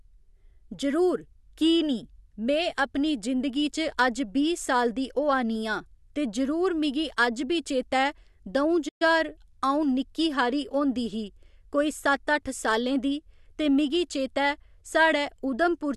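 At 8.88 s the speech cuts out abruptly in mid-flow and stays silent until 9.02 s, a gap of a little over a tenth of a second, before carrying on. This is a playback stall: the player was likely starved of data or had its output thread held up, so nothing reached the output until it recovered. On a waveform it shows as a flat line slicing through the speech envelope; a spectrogram shows a clean vertical blank band across all frequencies.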